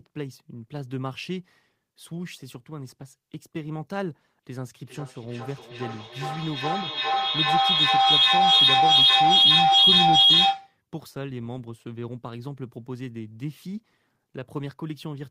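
Feedback howl runs from 4.84 to 10.77 s: two devices sharing a room and call let the microphone-to-loudspeaker loop gain level each pass, so repeats pulse roughly every 0.4 s, narrowing to a piercing tone near 3 kHz and peaking about 14 dB above the speech.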